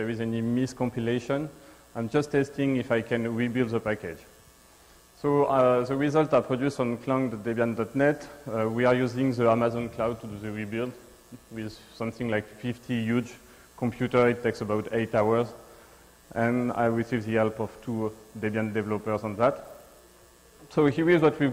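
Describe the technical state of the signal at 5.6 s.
At 5.6 s the signal is intact, with no audible fault.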